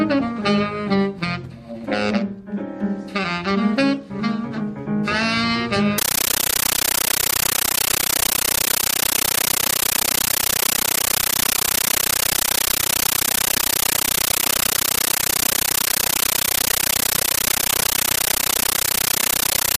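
From 5.98 s to the end, a compressed stream is played as audio: an AC-3 (Dolby Digital) bitstream, most consistent with a high-rate 640 kbps encode, reaches the output undecoded and is treated as ordinary samples. Each coded frame becomes a 13.3 ms burst of harsh noise followed by silence, repeating at 31.25 Hz, so the sound is replaced by very loud, chattering static with a rapid, regular stutter.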